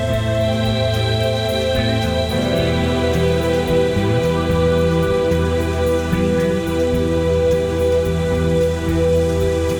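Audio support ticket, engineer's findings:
No faults found on listening to this music clip. Nothing to escalate and no component flagged for follow-up.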